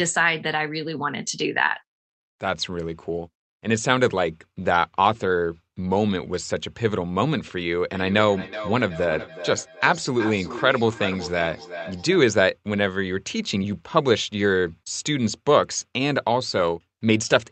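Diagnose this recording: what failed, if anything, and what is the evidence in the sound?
Feedback echo between two devices is present from 7.91 s to 12.24 s. Each stretch of speech returns at a fixed spacing of roughly 0.4 s, with repeats reaching about -12 dB below the direct speech. The repeats sound thinner and more ringing as they cycle. The fault is in call processing. A second device in the room plays back what this microphone sent, and this microphone picks it up again, and the local echo canceller cannot remove sound it did not play itself.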